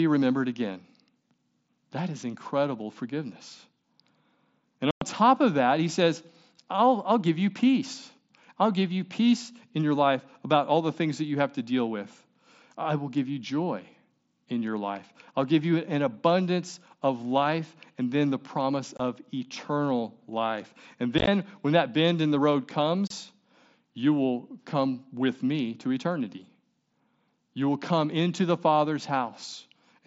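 Unconcealed Bluetooth headset packet loss drops voice packets with nothing filling them, leaving abrupt silent holes: 4.91 to 5.02 s, 18.97 to 19.00 s, a chopped stretch at 21.18 to 21.28 s, and 23.07 to 23.11 s, all over the mSBC link's light graininess.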